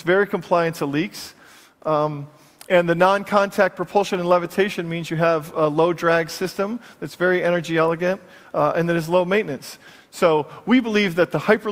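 No technical faults are audible.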